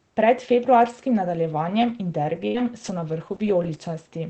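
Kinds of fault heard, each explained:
Burst of packet loss: consecutive packets were lost near 2.47 s. The last sound is extended and fades for about 67 ms, then 60 ms of speech is skipped.
Lost packet rebuilt from error correction: five 60 ms packets between 2.54 and 3.69 s play from low-bitrate copies in following packets, with no gap but rougher, noisier speech.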